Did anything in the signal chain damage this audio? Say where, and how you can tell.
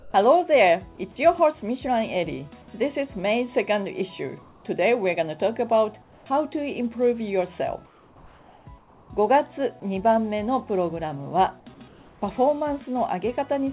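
Yes. The call processing likely ran discontinuous transmission, so in pauses the sender stopped sending and the receiver played comfort noise in place of the background. This happens at 0.0–0.14 s, 4.42–4.64 s, 6.02–6.26 s, 7.86–8.66 s, 8.78–9.1 s and 11.88–12.22 s. Each time, the real background, about 30 dB below the loudest passages, turns into a steady, featureless hiss about 3 to 5 dB quieter, then switches back when sound resumes.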